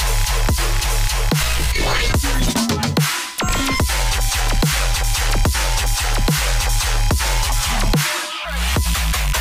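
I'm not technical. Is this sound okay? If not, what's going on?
No. A steady, high-pitched whine at 1 kHz runs under the whole clip: USB whine, likely the computer's USB connection leaking electrical noise into the audio. Unlike mains hum, which is a low buzz, this is a thin, fixed tone.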